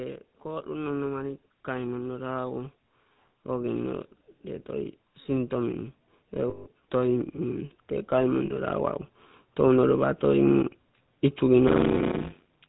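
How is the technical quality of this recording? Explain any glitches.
The recording is speech with clear technical faults: codec damage throughout, a gain swell at the start, two dropouts, and a block-size fault at the end.

The GSM full-rate codec runs through the whole clip, at 13 kbps. It models the voice as a vocal-tract filter fed by sparse, regularly spaced pulses, which gives a plainly audible buzzy, gravelly roughness. On a spectrogram, energy stops sharply at 4 kHz, with smeared harmonics below.

Automatic gain rising runs from 0.42 to 2.71 s. The gain control judged the input too quiet and raised the level by about 5 dB over that stretch. Voice and background swell together. On the waveform, the envelope grows steadily rather than jumping.

Lost GSM frames appear at 6.50 to 6.68 s (160 ms) and at 8.46 to 8.51 s (40 ms). Each gap was filled by repeating the settings of the last good frame, so the sound hangs as a metallic ring. 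The spectrogram shows frozen, repeated bands.

A block size mismatch (padded) runs from 11.67 s to the end. One stage writes shorter blocks than the next reads, which fits 256-sample writes, and the remainder of each block is zero-filled. This produces a 91.9 Hz buzz and slows the audio to 0.533 speed with the timbre kept. The waveform shows regularly spaced flat gaps.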